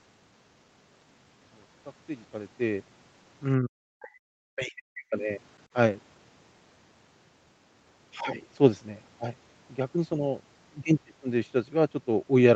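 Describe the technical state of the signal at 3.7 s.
Speech suppressed in double talk covers 3.59 to 5.14 s, so 3.7 s falls just inside its start. The speech level collapses, at its deepest by something like 40 dB, over roughly a second and a half. This is likely the echo canceller's suppressor, unable to separate near-end speech from loudspeaker echo during simultaneous far-end activity, attenuating the near-end speech along with the echo. The speech sounds dipped, pulled well down in level.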